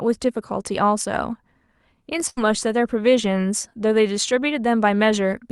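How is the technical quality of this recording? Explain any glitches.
There's one clear glitch in this speech recording: a burst of packet loss from 2.29 to 2.39 s. The sound arrived over a call path, and a run of packets either went missing or showed up too late to play. The receiver papered over the hole by stretching out the last bit of sound for about 74 ms, fading it down as it went, so you hear a brief smeared, dying-off tail. Then the speech picks up again, but roughly 80 ms of it has simply been skipped. The call codec's top end stops around 12 kHz, which fits Opus at about 64 kbps.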